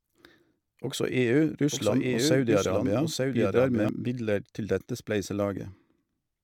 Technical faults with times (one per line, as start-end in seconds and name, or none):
1.73-3.89 doubled audio track